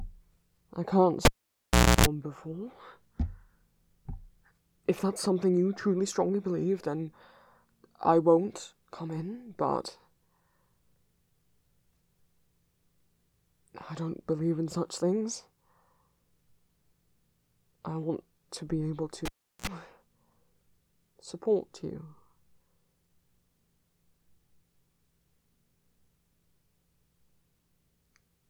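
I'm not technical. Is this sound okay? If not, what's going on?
No. Twice the cable gets pulled and plugged in: at 1.25 s a pop, about 0.76 s of near silence, a 60 Hz buzz while the plug half touches, then another pop. At 19.25 s the same happens, shorter, with a quick buzz.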